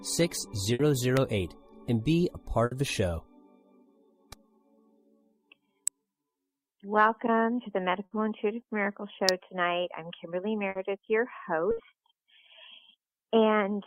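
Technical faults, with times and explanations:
0.73–0.82 s, 2.65–2.74 s, 8.05–8.14 s, 10.69–10.78 s, 11.71–11.80 s: burst of packet loss. Each time, a run of packets failed to arrive in time, so the receiver stretched the last sound for about 60 ms while fading it. About 60 ms of audio then goes missing, and the sound resumes further on.
1.17 s, 5.88 s, 9.29 s: electrical switching spike. Likely a nearby switch, motor or static discharge arcing and being picked up by the audio line. Each is a sharp, very brief snap sitting on top of the sound rather than replacing it.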